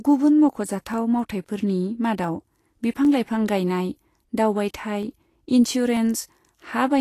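Plainly audible lossy coding, likely Vorbis compression at a low setting consistent with about 36 kbps, runs through the whole speech clip. The treble is quantised so coarsely that detail turns to hiss and grain, consonant attacks blur, and the high-frequency cut-off is lowered.

Short gaps in the sample stream, likely dropped samples amounting to a fraction of a millisecond each, make the waveform jump abruptly. Each is heard as a single sharp click, with one at 0.94, 2.24, 3.05, 5.03 and 5.97 s.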